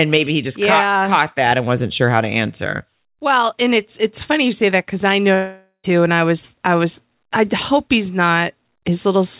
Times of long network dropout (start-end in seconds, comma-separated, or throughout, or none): 5.34-5.86